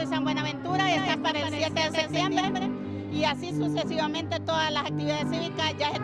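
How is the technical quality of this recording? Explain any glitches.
The recording has one clear fault, a doubled audio track. From 0.92 s to 3.32 s, a second full-band copy of the sound runs roughly 200 ms behind the original, about 5 dB quieter. It is likely captured again through a slower path. The copy carries no decay or room colour, producing a hard slapback, and it cuts in and out abruptly at both ends.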